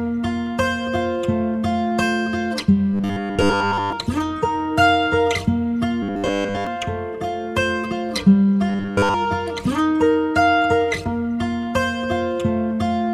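Around 2.94 to 3.93 s, 6.03 to 6.67 s and 8.69 to 9.14 s there's a robotic sound from repeated short buffers, a rigid 100 Hz metallic buzz, likely from a 10 ms chunk replayed over most of each stretch.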